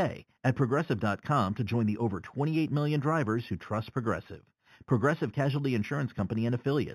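Throughout the speech there is a faint metallic shimmer on sibilants, and the top of the band sounds dulled. This is imaging from linear upsampling. Straight-line interpolation, which fits raising an 8 kHz rate to 44.1 kHz, leaves mirrored spectrum between 4 and 8 kHz, roughly 30 dB down.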